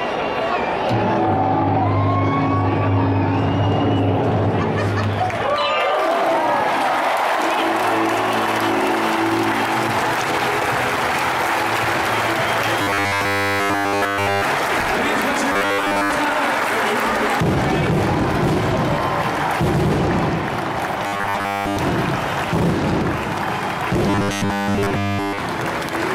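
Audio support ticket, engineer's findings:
Robotic sound from repeated short buffers at 12.82–14.44 s, 15.52–16.11 s, 21.07–21.79 s and 24.08–25.38 s. Rigid metallic 100 Hz buzz, so the repeats are 10 ms long. Nearly all of the first span is repeated, most of the later three. Likely cause: playback buffer underrun, with the last 10 ms looped while incoming audio is dropped. Spectrogram shows a harmonic comb at multiples of 100 Hz. Waveform shows identical 10 ms cycles.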